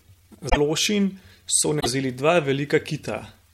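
Short glitches break through the speech from 0.46 to 0.57 s and again from 1.79 to 1.86 s. Both are damaged data in a compressed stream: corrupted bytes make the decoder misread those frames and lose sync until it locks onto a valid frame header again.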